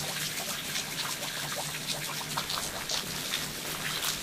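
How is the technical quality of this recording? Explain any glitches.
The recording has one clear problem, and it sits in the last stretch of this everyday-sound clip. From 2.43 s to the end at 4.23 s there's buffer tearing. The writer and reader of the ring buffer have slipped, so roughly a third of each period replays audio about 30 ms old, with hard joins. You hear a steady robotic buzz at 93.8 Hz, which fits a 512-sample buffer.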